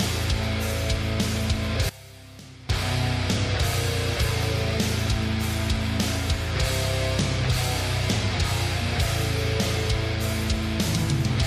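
From 1.89 to 2.69 s, one stereo channel has likely been inverted in polarity, so the material common to both sides cancels when they are summed. For those 0.8 seconds the sound drops by about 20 dB and turns faint.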